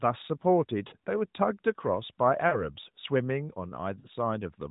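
Three short dropouts land at 0.88–0.95 s, 2.48–2.64 s and 4.00–4.08 s, and they're lost AMR speech frames. Each sounds like about 40 ms of missing audio, which fits two 20 ms frames failing their check. The decoder covers the gap by repeating the last good pitch and vocal tract settings at falling gain, so you hear a quick smeared warble and dip before the sound picks back up, a touch weak. The narrowband telephone band itself comes through as expected.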